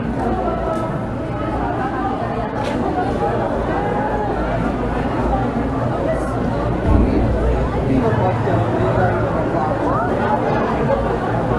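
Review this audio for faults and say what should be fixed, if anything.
Nothing here needs fixing; no faults turned up anywhere in the recording, so it can stay just as it is.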